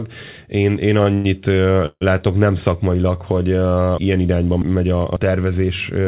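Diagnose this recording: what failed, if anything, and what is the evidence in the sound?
Network and jitter-buffer stage: a late packet emptied the buffer, so at 1.04 to 1.08 s the sound is held about 20 ms as a short stall from a late packet, with a slight buzz or dip.

Call audio freeze at 1.14 to 1.26 s and 1.86 to 2.03 s: packets were likely held up on the network. The sound stretches into a fading buzz or hiss, and the second freeze ends in about 40 ms of silence before "látok nem szakmailag hogy".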